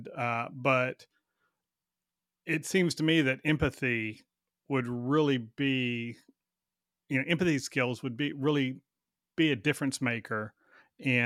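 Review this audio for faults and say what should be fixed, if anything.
Nothing stood out on listening to this speech clip, so there is nothing here that needs fixing.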